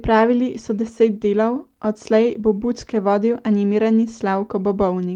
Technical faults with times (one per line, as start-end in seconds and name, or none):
none